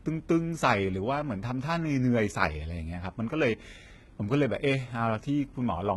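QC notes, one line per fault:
Throughout, HE-AAC compression: the speech sounds heavily mangled, s sounds come out gritty and lispy, and nothing survives above 11.8 kHz. That's likely HE-AAC faking the treble by copying lower bands upward, so harmonics don't line up; the damage fits roughly 16 kbps.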